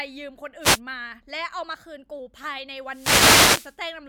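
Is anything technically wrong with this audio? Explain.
Yes. Wireless microphone noise hits occur from 0.61 to 0.80 s and from 2.86 to 3.79 s. The FM radio signal fades, and receiver static swishes over the speech. From 1.63 to 2.19 s, a drift correction step is likely. Playback runs 6.1% fast, raising pitch 103 cents, then snaps back.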